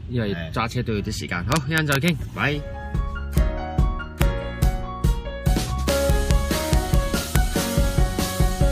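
Integer overflow cracks appear at 1.52–2.08 s, 3.38 s, 4.22 s, 4.63 s, 5.89–6.31 s, 6.73–6.94 s and 7.36 s. On each loud peak the sample value exceeds the integer ceiling, by only about 0 to 1 dB, and instead of being held at the limit it wraps to the opposite extreme of the range. Every wrapped peak becomes a full-scale jump, heard as a harsh, violent crack, noticeably sharper than ordinary clipping.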